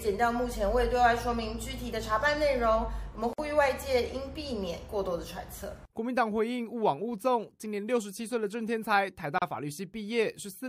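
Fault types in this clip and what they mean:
Gap at a join of encoded pieces: at 3.33 s and again at 9.38 s the sound drops out for about 51 ms and then 34 ms, with smeared edges, before carrying on where it stopped. The audio was encoded in separate pieces, about 6 s apart, and joined without trimming, so each encoder's leading delay and its padded final frame remain as short silences at the seams.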